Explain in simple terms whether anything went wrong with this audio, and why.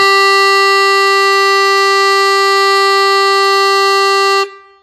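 WMA compression damage runs through the whole clip. The music rings and sounds washy, with a hiss that swells and fades along with it, and nothing remains above 15.2 kHz. The likely cause is an older WMA encoder discarding quiet detail and smearing its errors.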